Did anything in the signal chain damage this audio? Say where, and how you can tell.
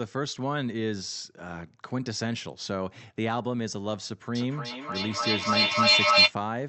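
Yes, at the call-processing stage: feedback echo between two devices from 4.35 to 6.36 s. The speech returns at a fixed interval of roughly 300 ms, each repeat thinner and more ringing, and the loop builds up, peaking about 10 dB above the speech. A second device in the room replays the far end, and that microphone recaptures it, beyond any echo canceller's reach. Room reverberation would decay smoothly, with no evenly spaced, growing repeats. The Opus path's top end stops near 8 kHz.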